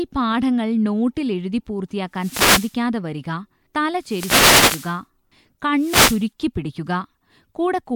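Three wireless microphone noise hits break into the speech: 2.14 to 2.79 s, 3.99 to 5.01 s, and 5.76 to 6.29 s. Each sounds like a burst of static or swish. The FM radio link fades as reflections cancel, so receiver noise rises.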